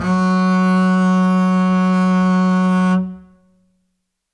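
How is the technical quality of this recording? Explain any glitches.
No glitches are audible anywhere in the music, so there is nothing to explain.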